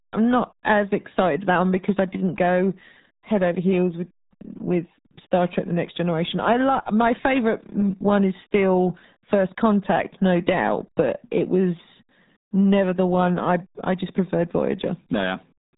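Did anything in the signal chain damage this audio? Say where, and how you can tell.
Yes. The damage comes from the codec stage: a RealAudio 14.4 codec throughout the clip. Nothing above 3.8 kHz survives, so the speech is muffled. Heavy coding damage makes it gargly. That fits an 8 kbit/s dial-up codec starving the signal of bits.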